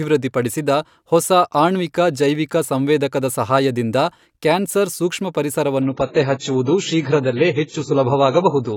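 At 5.82 s the speech suddenly thins out and stays that way to the end: an adaptive stream at a lower bitrate. The connection evidently slowed, so playback switched versions with no gap. Nothing survives above 7.7 kHz, and the swirly artefacts fit something near 16 kbit/s.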